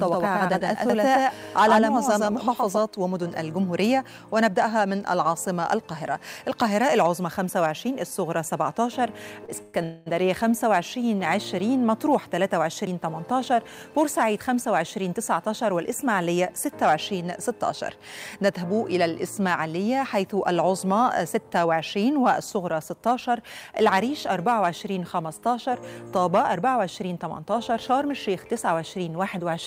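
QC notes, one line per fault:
0.00 to 2.78 s, doubled audio track: a second full-band copy of the sound runs about a tenth of a second behind the first, at roughly the same level, giving a flat slapback with no decay or room colour. It is already present when the clip opens and cuts out abruptly at 2.78 s. The likely cause is the same signal being captured twice, once through a slower path, and mixed back together out of step.
0.90 s and 12.87 s, dropped buffer (overrun): each is a sudden forward jump in the sound with no silence in between. Roughly a tenth of a second is lost at 0.90 s and a few tens of milliseconds at 12.87 s. This is likely the program failing to collect input before the hardware overwrote it, so the surviving audio on either side is butted together.
9.45 to 9.50 s, short stall from a late packet: the sound is held on for 27 ms with a slight buzz or dip, then resumes exactly where it left off. 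Nothing is missing. A packet arrived after its playout time, the jitter buffer ran dry, and the receiver stretched the last sound to cover the wait, adding 27 ms of delay.
9.62 to 9.76 s and 9.84 to 10.08 s, call audio freeze: the sound is continued as a fading buzz or hiss for 116 ms and then 226 ms, never quite reaching silence, before playback picks up from the point where it stopped. No audio is lost, but each gap pushes everything after it later. The likely cause is packets held up in transit, emptying the jitter buffer while the receiver conceals the wait.
13.76 to 15.71 s, 21.09 to 21.73 s and 26.25 to 28.71 s, jitter buffer speed-up: the sound runs faster at unchanged pitch, about 7%, 10% and 4% respectively, and the first two come across as hurried. Roughly 150 ms, 70 ms and 100 ms are trimmed out in small pitch-period slices. The receiver was holding more audio than its target and shortened the backlog to bring latency down.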